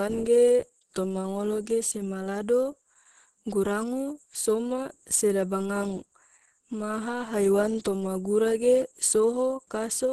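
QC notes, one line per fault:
Throughout, Opus compression: the speech sounds muffled, hoarse and grainy, with a rough, noisy texture on voiced sounds and nothing above 12.1 kHz. This likely comes from heavy Opus encoding in its hybrid mode, where a speech-oriented coder handles the lower band and the upper band is filled coarsely. The result is a super-wideband ceiling and damage that fits a bitrate of about 12 kbps, too few bits to keep fine spectral detail.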